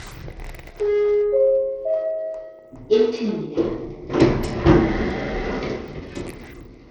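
Everyday sounds fill the clip, and the damage runs through all of it. The top end is thin and unstable. Treble thins out and flickers in and out. A gritty, grainy noise sits on the sound, with aliasing. The likely cause is Bluetooth SBC compression at a starved bit pool. The weak high sub-bands get few or no bits, and the rest are quantised coarsely. The damage is plainly audible and fits a low rate of around 80 kbps.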